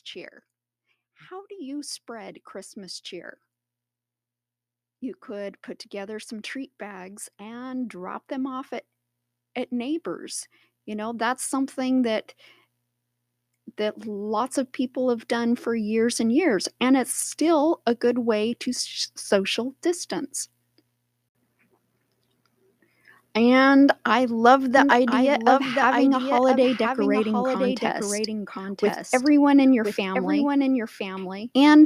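From 1.02 s to 15.96 s, automatic gain rising lifts the level by 18 dB, the gain control creeping up because it judged the input too quiet. Speech and background noise swell together until "and years and it's", and the waveform envelope widens steadily.

At 24.77 s, just after "I love", a doubled audio track appears and runs to the end. It was likely caused by a second capture through a slower path. A full-band copy about 5 dB quieter trails roughly a second behind, starting abruptly, and the spectrogram shows each word repeated.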